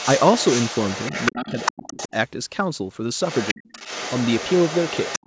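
From the very start to about 1.32 s there's a second voice sitting underneath the main talker, roughly 10 dB down. That's the other side's voice leaking through, most likely the far end playing on the talker's loudspeaker and not fully scrubbed out by the echo canceller. At 1.31 s the main speech starts dipping until 2.13 s, about half a second in total, sinking by something like 35 dB at its worst. That's speech suppressed in double talk: with both sides going at once, the canceller likely couldn't tell them apart and pulled everything down. Meanwhile, from 1.48 to 2.08 s, the leaked voice gets louder, only about 5 dB under the talker.

It comes back at 3.25 s and runs to the end, quieter this time at around 15 dB below. The main voice gets clamped again from 3.53 to 3.79 s, diving about 40 dB, and once more in the last moments from 5.19 s to the end, a brief dip of around 40 dB.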